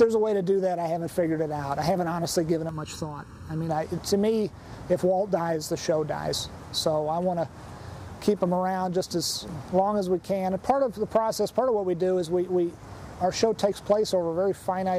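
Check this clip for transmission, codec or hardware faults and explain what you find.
One fault: channel delay (comb filtering) from 2.69 to 3.69 s. A copy lagging by under a millisecond is summed to mono, cancelling evenly spaced frequencies from around 700 Hz upward. It sounds hollow and phasey, and unlike flanging the notches stay fixed rather than sweeping.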